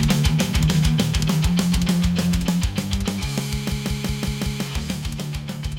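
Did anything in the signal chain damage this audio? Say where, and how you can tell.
Yes. A system hang loop at 3.72–4.64 s, in the driver or buffer stage: one 186 ms slice repeats five times, a 5.4 Hz machine-gun stutter, fitting an 8192-sample ring buffer.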